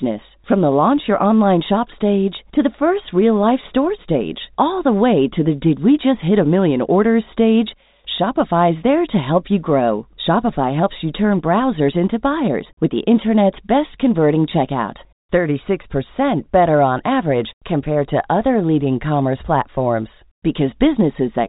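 No technical faults are audible.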